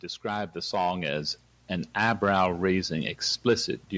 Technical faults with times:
0.05-2.96 automatic gain rising

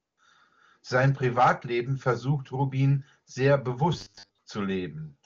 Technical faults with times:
0.01-0.17 AMR comfort noise
3.93-4.38 robotic sound from repeated short buffers

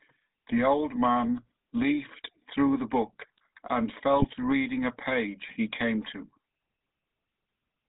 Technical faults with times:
0.00-7.88 GSM full-rate codec
4.18-4.25 GSM bit errors

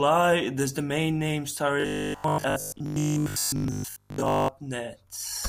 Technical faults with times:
1.80-4.48 robotic sound from repeated short buffers

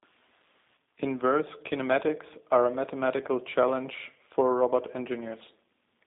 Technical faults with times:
0.00-6.07 G.729 codec

